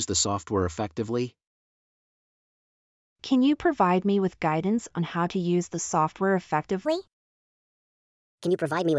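From 6.85 s to the end, a wrong sample rate speeds the sound up 1.38 times and raises pitch about 5.6 semitones, consistent with 16 kHz material played at 22 kHz.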